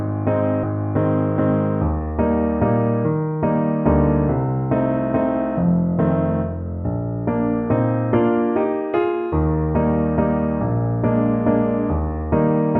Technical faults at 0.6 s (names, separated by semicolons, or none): skip ahead